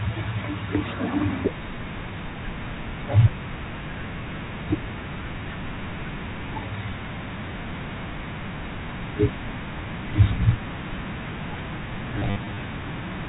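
Near the end, from 12.19 to 12.57 s, the speech breaks into a robotic stutter with a brief buzz, the effect of packet loss with the last packet repeated. About 200 ms of audio went missing, scattered across 380 ms in runs up to 60 ms, which fits 10 ms packets. The receiver replayed stale packets out of step with the pitch, over the narrowband sound of the G.711 telephone coding.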